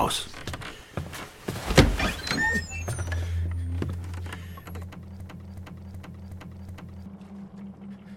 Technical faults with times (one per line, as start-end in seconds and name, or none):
5.20-7.06 system hang loop